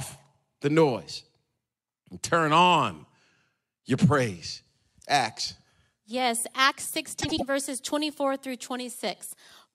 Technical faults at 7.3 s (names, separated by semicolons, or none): frames out of order